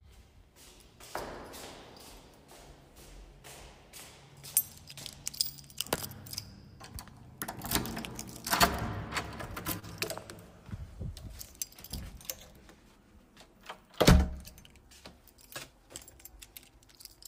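At 9.79 to 9.85 s there is a short stall from a late packet. The jitter buffer ran dry, so the receiver held the last sound for about 28 ms, then resumed where it left off with nothing lost. This leaves a brief smeared hold with a slight buzz or dip, and everything afterward plays 28 ms later.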